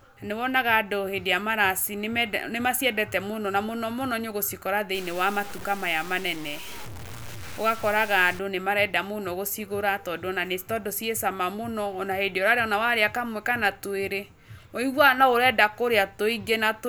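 A speech recording with one clear fault. From 4.95 to 8.39 s the sound turns grainy and harsh. The grit rises and falls with the speech itself, and quiet passages break up rather than fading smoothly. The error sits only about 20 dB below the signal. This is low bit depth without dither. The likely cause is truncation to around 6 bits, with no dither to decorrelate the rounding error.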